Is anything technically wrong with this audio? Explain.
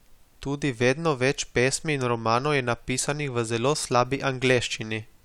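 No, nothing technically wrong can be heard in this speech recording. There is nothing here that needs fixing.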